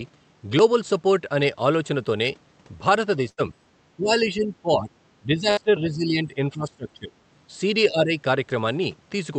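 At 3.29 to 3.47 s a burst of packet loss breaks the sound. The receiver stretches the last audio for about 87 ms, fading it into a held buzz or hiss, and then jumps ahead past roughly 80 ms that never arrived. On a spectrogram this shows as flat, smeared horizontal bands that darken, then an abrupt restart. In the waveform the envelope decays smoothly and then snaps back.

From 3.96 to 4.96 s the level dips and chops for about 0.7 s in total, falling by as much as about 20 dB. This is likely speech suppressed in double talk, where the echo canceller ducks the talker while the far side speaks. The waveform shows gated, notched sections, and the spectrogram shows energy fading.

The same pumping returns from 5.22 to 7.12 s over about 1.5 s, again reaching about 20 dB. Inside it, at 5.51 to 5.59 s, a second packet-loss burst stretches the sound for about 58 ms and skips roughly 60 ms. A shallower dip of about 10 dB follows at 7.89 to 8.15 s. 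Throughout the clip, the spectrogram's top edge stops near 8 kHz, which fits the Opus call path.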